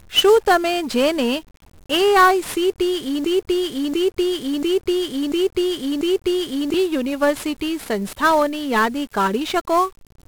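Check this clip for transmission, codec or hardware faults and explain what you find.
Two faults are present in this speech clip: a codec fault across the whole recording and a playback fault in the middle.

The 1-bit DFPWM compression runs throughout. Each sample carries one bit nudging an adaptive level up or down, and the damage is heavy. The result is dense broadband quantisation noise, fuzzy, crackly speech and treble submerged in hiss, which fits a stream of about 48 kbps.

A broken-record loop runs from 3.24 s to 6.74 s, just before "યુનિવર્સિટી સંસ્થાઓની યાદી". A fragment of about 0.69 s repeats identically five times back to back, and the speech due in that span is lost. The likely cause is a stalled player, encoder or stream re-sending its last buffered fragment.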